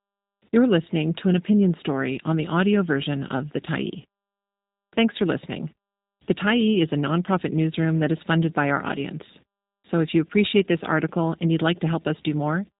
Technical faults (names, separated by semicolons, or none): G.729 codec